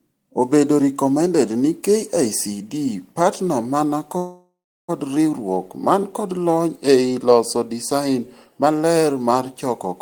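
After "partner man", a call audio freeze from 4.17 to 4.90 s, likely a starved jitter buffer, smears into a fading buzz, then flat waveform silence before "riuruok man kod lony'".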